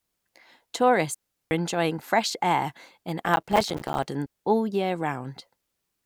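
At 1.15 s there's a digital wireless dropout: the link lost too much data and the receiver muted for about 0.37 s, leaving a clean, near-silent hole with no noise burst either side, right before "enjoying fresh air in". It happens again from 4.26 to 4.46 s, a shorter mute of about 0.2 s just before "all year".

Between those, from 3.26 to 4.03 s (after "enjoying fresh air in" and before "all year"), there's processor overload crackle. The processor kept missing its deadlines on tiny buffers of roughly 5 ms, dozens of them in a row, and each miss dropped in a hard-edged sliver of silence. Together they give a gritty tearing over the speech that clears once the load passes.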